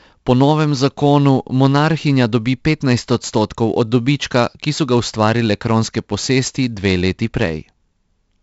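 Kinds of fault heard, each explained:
4-bit ADPCM compression: samples stored as coarse 4-bit steps off a prediction leave heavy grit on the speech, and the cutoff near 7.7 kHz fits 64 kbps.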